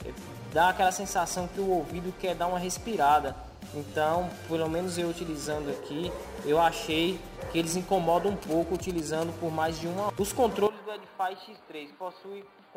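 Sample clock jitter runs through the whole recording. An unsteady converter clock, wandering by about 7 microseconds, places each sample slightly off time, leaving a roughness about 25 dB below the signal that grows on loud, bright passages. On a spectrogram it shows as a broadband haze following the signal's energy.

From 8.42 to 9.24 s come GSM signalling bursts. A nearby 2G phone sending short radio bursts is rectified by the audio circuit into a galloping ticking buzz at about 217 Hz, about 15 dB below the sound. A spectrogram shows evenly spaced vertical striations with harmonics; the waveform shows regular spiky clusters.

At 10.67 s the sound turns duller and drops by about 10 dB, with no gap, until the end. This is likely an input switched to a poorer device. Nothing passes above 4.8 kHz, so the spectrogram shows a hard ceiling, with a new noise floor about 40 dB down.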